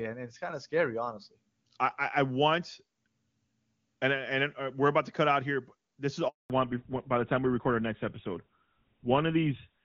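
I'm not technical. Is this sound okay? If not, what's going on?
No. Two things happen close together near the end. First comes a handover gap: right after "here but this is", the phone switched the call from one network to another, and from 6.28 to 6.50 s, about a fifth of a second, no sound got through. The audio dies off quickly into clean silence, and whatever was said then is lost. Unlike random glitching, it's a single hole, and the sound comes back changed.

That change is a fallback to narrowband. From 6.50 s to the end, the call runs on an older, lower-quality phone codec instead of the clear HD Voice heard earlier. Everything above 4 kHz is gone, so the voice turns duller and rougher, like an old landline. What marks it as a codec switch rather than a muffled microphone or someone turning away is that the loss starts at one exact moment, right after the gap, and stays the same for the rest of the clip.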